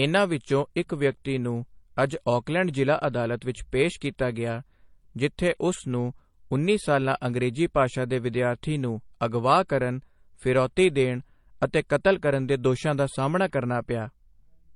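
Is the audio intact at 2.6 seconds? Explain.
No. At 2.6 seconds, as across the whole clip, the speech shows transcoding between lossy codecs, likely an MP3 encode followed by an HE-AAC encode, with both stages sounding like low bitrates around 40 kbit/s. The second encoder spends its limited bits reproducing the first encoder's damage while adding its own, so artefacts from both stack together. Nothing survives above about 11.3 kHz.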